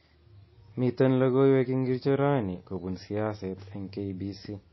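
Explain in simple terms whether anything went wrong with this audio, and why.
Something went wrong: the speech was likely squeezed into a tiny MP3, then resaved as a large file, a fault called low-bitrate audio saved at a high bitrate. Resaving restores nothing, so throughout the clip nothing above 5.8 kHz remains, and it sounds muffled.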